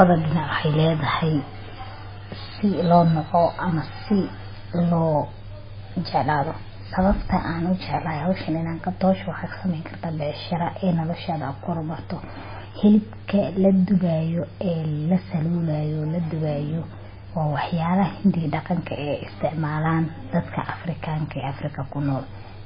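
From start to finish the speech sounds muffled and watery, with nothing above 5 kHz, so the s sounds lose their edge and swirl with metallic chirps while consonant attacks smear. This is most likely heavy MP3 compression, at a level of damage that fits a very low bitrate of around 16 kbps. Starved of bits, the encoder cuts the treble at a fixed point and zeroes weaker frequency lines that flicker on and off between frames.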